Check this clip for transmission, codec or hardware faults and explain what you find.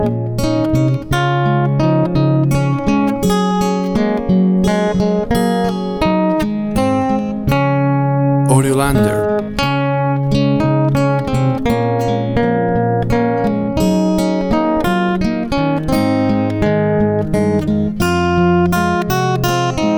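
No transmission, codec or hardware fault can be heard anywhere in the clip. Nothing in it calls for further explanation.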